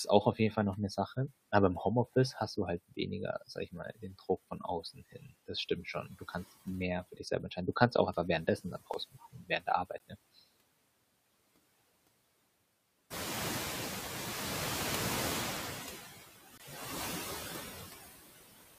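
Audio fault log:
Throughout: noise suppressor artifacts. The background is held down by about 15 dB, frame by frame. It does not sit at one steady level. It dips in the pauses and swells back under the speech.
0.05–0.56 s, 3.41–6.34 s, 7.12–7.57 s, 8.47–10.15 s: speech cut by the noise suppressor. In each span the suppressor mistakes quiet parts of the speech for noise. It pulls them down along with the background. The drops reach about 10, 17, 12 and 19 dB in turn. Only short pieces are hit each time, about a tenth of a second at first and close to half a second in the longer spans. Soft consonants and word endings come out faint or swallowed.
8.94 s, 9.98 s, 16.58–16.60 s: block of digital silence. The sound drops out and returns with no fade. The first gap lasts about 3 ms and is heard as a tick. The second lasts 16 ms and the third 21 ms, and both sound like brief holes. The last one fits a 1024-sample buffer that was not filled in time.
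13.1–15.67 s: noise suppressor catching up. The room noise jumps by about 16 dB at around 13 s and then sits about 8 dB below the speech. The suppressor's noise estimate trails that rise. At first the louder background comes through with only about 6 dB of reduction. Over some 2.6 seconds the estimate adapts and the noise sinks back down. It is heard as noise that swells and then slowly fades.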